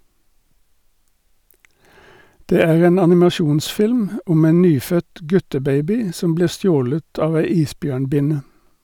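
From 2.60 s to 3.23 s the speech runs into hard clipping. For about 0.63 s the level exceeds what one stage in the chain can pass, overdriving it by about 2 dB, so the waveform peaks are sheared flat. Those squared-off tops generate harmonics well up into the high frequencies. With an overload this small, the damage lands mainly on the loudest moments, heard as a brief crackle and edge on the peaks.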